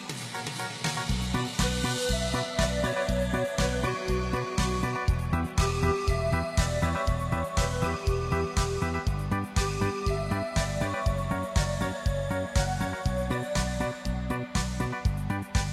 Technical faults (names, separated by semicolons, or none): adaptive stream starting at a low bitrate